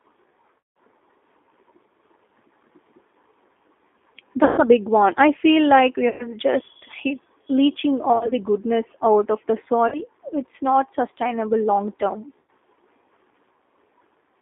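Speech coded with G.729A at 8 kbit/s confines the sound to a narrow line band of about 250 Hz to 3.6 kHz, and the codec's pulse-based reconstruction of the voice leaves it plainly rough, thin and slightly synthetic throughout. VoIP packet loss concealed by the speech codec occurs at 0.59, 4.44, 6.09, 8.13, 9.88 and 12.38 s, with gaps of about 170, 140, 100, 80 (scattered over 160 ms), 40 and 100 ms. Each time, the decoder extends its last pitch and filter into a buzzy tone or coloured noise that fades, and the voice stays weak and smeared briefly afterward.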